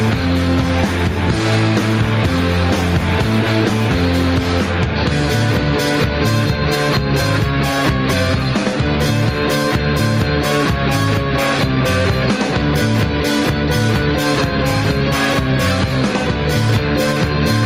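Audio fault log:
Throughout, gain pumping: the gain swings about 5 dB under loud moments, likely a fast limiter reining in overdriven gain.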